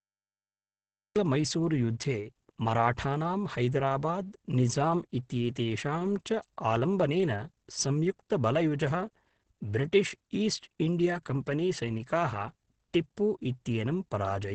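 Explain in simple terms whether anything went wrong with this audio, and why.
Yes, two things went wrong here.

First, there's a cut-off start. The clip opens with dead digital silence, and then at 1.16 seconds the speech just appears mid-sound, with no natural lead-in or fade. It sounds like the recording or stream started a beat too late and caught the speaker partway through, so that first bit of sound arrives abruptly instead of building up the way speech normally does.

Second, all the way through, the speech sounds muffled, hoarse and a bit rough, and nothing comes through above about 8.7 kHz, so the crisp top end of consonants is missing. That pattern is most likely Opus compression squeezed hard. At low quality, Opus switches to a mode built for speech that trims the upper frequencies and smears fine detail, which gives this dull, raspy character.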